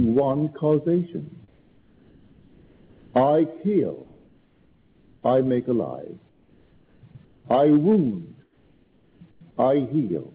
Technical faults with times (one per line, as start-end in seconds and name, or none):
1.48-3.14 comfort noise in place of the background
4.05-5.23 comfort noise in place of the background
6.29-7.45 comfort noise in place of the background
7.13 sound dropped by the voice detector
8.43-9.41 comfort noise in place of the background